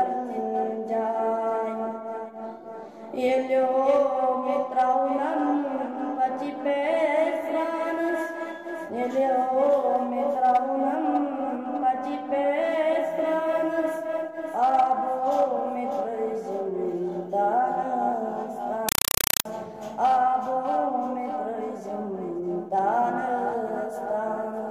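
From 18.89 to 19.45 s, very loud chattering static replaces the sound: 4 ms noise bursts repeating 31.25 times a second, with silence between. This is a compressed stream played as audio. AC-3 data, fitting a 192 kbps stream, reached the output as raw samples without being decoded.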